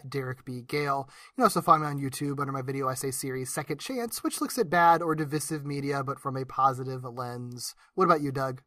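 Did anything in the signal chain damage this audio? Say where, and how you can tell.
No, nothing in this speech recording stood out as damage from any stage of the signal chain on listening.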